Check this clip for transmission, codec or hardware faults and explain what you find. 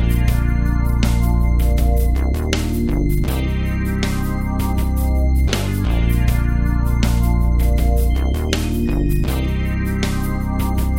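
Nothing faulty can be heard anywhere in this audio.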